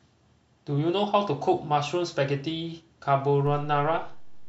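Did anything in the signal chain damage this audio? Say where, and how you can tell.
Yes. A DC step at 3.47 s gives a low thump as the zero line jumps by about -35 dBFS and holds to the end, pointing to a converter offset.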